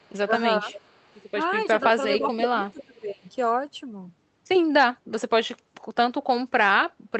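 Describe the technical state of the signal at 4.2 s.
At 4.2 s the audio is intact, with no audible fault at that moment.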